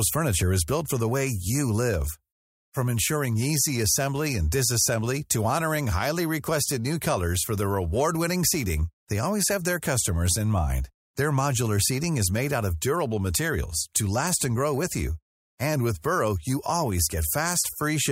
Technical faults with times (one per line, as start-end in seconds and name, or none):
7.60-8.79 GSM signalling bursts